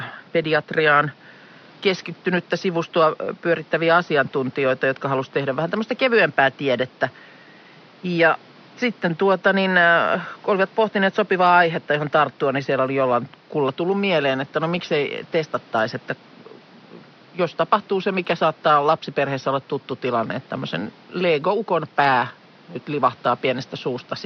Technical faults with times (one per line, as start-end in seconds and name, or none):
none